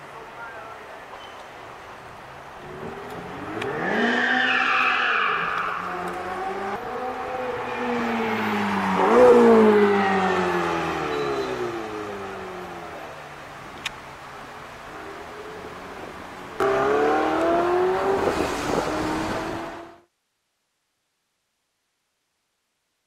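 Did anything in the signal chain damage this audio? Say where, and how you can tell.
No; the smooth fade ending at 20.11 s is normal.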